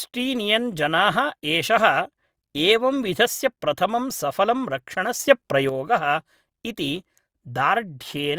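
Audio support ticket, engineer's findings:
Sudden gain jump, 5.20 to 5.69 s, right after "विधस्य प्रथमं सफलं". Speech and noise floor rise together by about 6 dB, then drop back. Likely an unramped digital gain setting or bit shift. Waveform: hard envelope step at both edges. Spectrogram: full-band brightening with sharp vertical boundaries.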